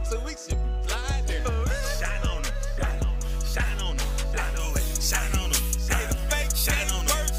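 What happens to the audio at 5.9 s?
At 5.9 s you're inside a stretch of pre-emphasis left on, running from about 4.59 s through to the end of the clip. The treble was lifted before recording or sending, the way an FM link does with its 75-microsecond curve, but nothing put the matching cut back afterwards. So the top end sits about 13 dB hot at 10 kHz compared with 1 kHz, and the sound turns thin, bright and sharply sibilant.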